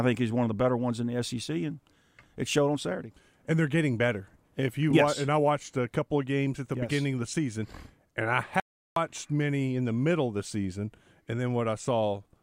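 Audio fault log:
8.60–8.96 s, audio dropout to silence: right after "the season and I" the sound cuts off abruptly and stays completely silent for 0.36 s, with no room tone in the gap, before it returns mid-flow at "many in the middle". The input feed was likely lost for that moment, through a disconnected device, a failed link or a stray mute, while recording carried on writing silence, so whatever was spoken there is missing.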